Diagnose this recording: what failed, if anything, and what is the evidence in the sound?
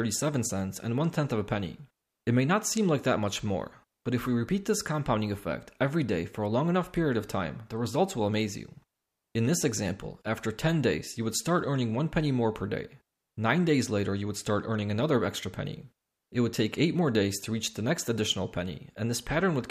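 Nothing stood out on listening; no stage of the chain left any mark that could be traced in the sound.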